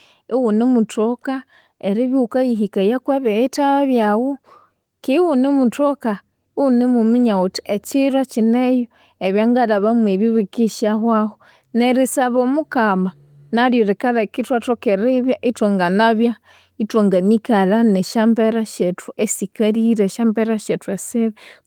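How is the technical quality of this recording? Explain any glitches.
Nothing in this speech recording trips it up, with no glitches to point to anywhere along the way.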